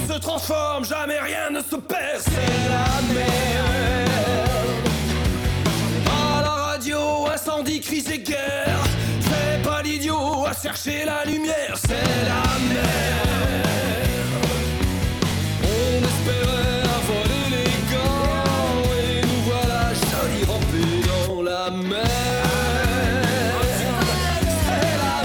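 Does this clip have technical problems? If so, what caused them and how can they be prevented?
Yes. Periodic USB or driver dropouts are present: something in the system stalled the USB bus or the audio driver about once every 1.00 s, and each stall skipped a couple of milliseconds of audio outright rather than filling the gap with silence. From 0.36 s to 24.30 s this produces a steady train of roughly thirty evenly spaced ticks, each a small splice where the waveform jumps, audible only while sound is present. Prevention means finding and disabling the background task that polls on that one-second cycle, using a dedicated USB port or hub, and raising the driver's buffer size.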